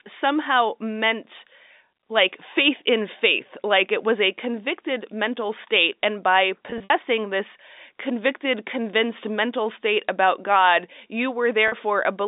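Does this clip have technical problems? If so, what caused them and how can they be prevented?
Yes. Packet loss with pitch repetition occurs at 6.70 to 6.90 s, right after "mental state and by" and before "this convicted convinced mental", and again at 11.68 to 11.72 s. The receiver filled the missing packets by repeating the last pitch period, so the voice briefly holds with a buzzy, frozen quality. The first gap totals about 100 ms scattered over 200 ms, with a longest run of 60 ms. The second gap is 40 ms. The telephone-band G.711 channel itself carries the speech cleanly. Adding a jitter buffer and forward error correction, or routing over a less congested network path, would prevent it.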